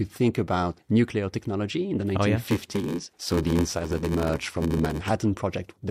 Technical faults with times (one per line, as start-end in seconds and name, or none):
2.42-5.11 block size mismatch (padded)